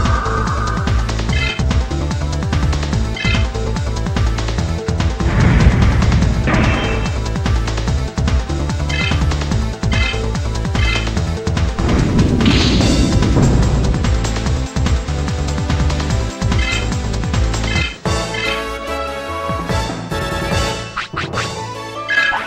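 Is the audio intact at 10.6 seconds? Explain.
Yes, at 10.6 seconds the audio runs cleanly, with no dropout, click, distortion or other fault to be heard at that point.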